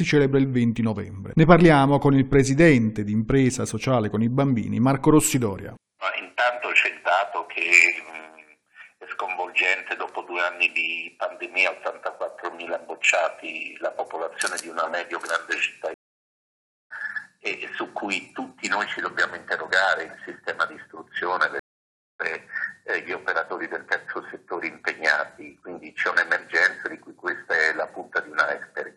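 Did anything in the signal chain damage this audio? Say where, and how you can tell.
Yes, there are two stream reconnects at the network stage. The connection dropped and the player restarted its decoder mid-stream. At 15.94 s there is a dead gap of about 0.96 s, ending at 16.92 s, and the sound picks up roughly 0.7 s further along than where it stopped. At 21.59 s a 0.6 s gap follows, ending at 22.21 s, with a jump ahead of about half a second. Each restart eases in over its first frame or so because the new decoder starts cold.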